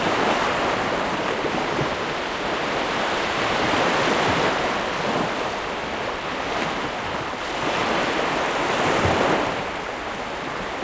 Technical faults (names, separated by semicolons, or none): none